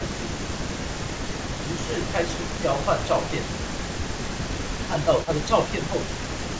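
From 0.15 to 5.04 s and again from 6.02 s to the end, a faint copy of the speech trails about 0.33 s behind and roughly 20 dB down. This echo leak is likely a loudspeaker echo the far end's canceller failed to remove; the fixed delay distinguishes it from room reverb. At 2.61 s, and in patches between 4.87 and 5.95 s, the talker dips by a few dB. This is speech suppressed in double talk, likely the canceller ducking both its own talker and the loudspeaker echo during overlap, which sounds like brief level drops rather than dropouts.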